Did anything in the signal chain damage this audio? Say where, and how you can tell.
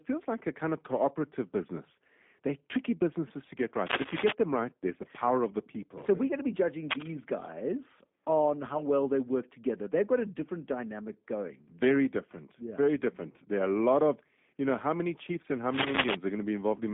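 Yes. Throughout, the speech sounds rough and slightly synthetic, with nothing above about 3.8 kHz. That points to the G.729 codec at 8 kbit/s, which rebuilds speech from a filter and sparse pulses.

Two bursts of dense, uneven scratching, roughly 5 dB louder than the speech, come at 3.86–4.33 s, between "tricky businesses to get" and "them right there's the", and at 15.73–16.15 s, after "many chiefs and how". This is cable scratch noise, likely from a worn cable or connector being moved in the analogue wiring.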